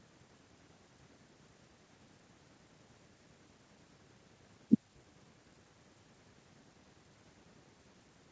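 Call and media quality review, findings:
Nothing stood out on listening to the speech, with the top end stopping at about 8 kHz as expected for the G.722 call path.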